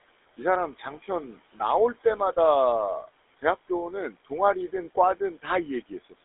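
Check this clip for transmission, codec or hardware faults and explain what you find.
Two faults run through the whole speech recording: noise suppressor artifacts and the roughness of the GSM full-rate codec.

The noise suppressor artifacts last from start to finish. The suppressor estimates the steady background, here room noise sitting about 20 dB below the speech, and turns down each frequency band it judges to be noise, frame by frame. It cuts by about 17 dB, so the noise floor dips in the pauses and swells back under each phrase. On a spectrogram the gaps between phrases look patchy and mottled, with isolated specks of energy rather than an even grey wash. The waveform's quiet stretches pump up and down in level.

The GSM full-rate codec damage is also present throughout and is plainly audible. This codec describes the voice as a vocal-tract filter driven by a sparse train of regularly spaced pulses. 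The coarse excitation gives the voice a buzzy, gravelly grain. The sound sits in a telephone band of about 300 Hz to 3.6 kHz, which fits a 13 kbps GSM full-rate stream. On a spectrogram the energy stops abruptly near 3.8 kHz with nothing above, and the harmonics look smeared and noisy rather than cleanly striated.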